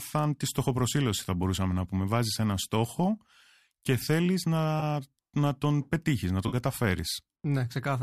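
At 4.80 to 4.83 s, just after "και θέλεις", a brief smeared, noisy patch blurs the sound, and at 6.48 to 6.55 s, after "τον πετύχεις να", a longer phasey smear follows. This is AAC frame loss with concealment: about 20 ms and then 40 ms of coded audio went missing, fitting two and four short frames, and the decoder patched each gap from the last good spectrum. The signal was likely carried by low-delay AAC, which left only light coding damage.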